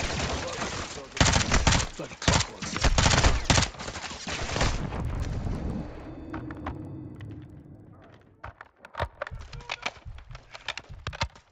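The audio carries faint ticks at 20 Hz throughout, a resampler restarted on every block. Each 50 ms block was converted separately, likely upsampled from 16 kHz to 48 kHz, leaving an edge error heard only with signal. A spectrogram shows evenly spaced thin vertical lines, and the waveform shows tiny steps every 50 ms.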